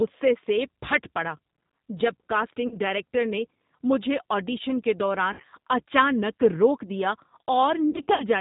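A speech clip with a narrowband, slightly rough and synthetic tone throughout, nothing reaching above 4 kHz, the plainly audible mark of the G.729 codec at 8 kbit/s rebuilding the voice from a vocal tract filter, pitch predictor and sparse pulses. Three short fading smears also break the sound: at 2.67 to 2.77 s just before "ڈائریکٹر نے مجھے آڈیشن", at 5.33 to 5.44 s between "نے مجھے آڈیشن کے" and "اچانک روک دیا", and at 7.90 to 8.25 s. These are VoIP packet loss concealed by the speech codec. The decoder stretches its last pitch and filter over gaps of about 40 ms, then 60 ms, then 180 ms scattered across 300 ms, which points to two, three and nine lost packets.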